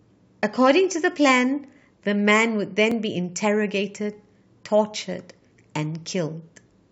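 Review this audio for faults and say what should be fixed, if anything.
At 2.91 s the speech has an overlap between stream segments. The time stamps of two segments overlapped, so about 12 ms of audio that was never duplicated got trimmed at the join, leaving a tiny skip. On the waveform this shows as an abrupt step where the trace jumps instead of continuing smoothly; on a spectrogram it appears as a thin vertical broadband line. The segments are about 4 s long. To prevent it, make sure segment time stamps line up exactly so the player has no overlap to trim.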